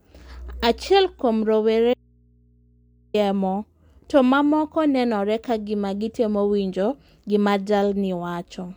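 At 1.94 s the speech cuts out abruptly for 1.2 s, returning at 3.14 s. This is an audio dropout to a faint residue. The gap holds only mains hum, around 35 dB below the speech, likely from an input left live after the signal was lost. The hard edges and hum set it apart from a natural pause or fade.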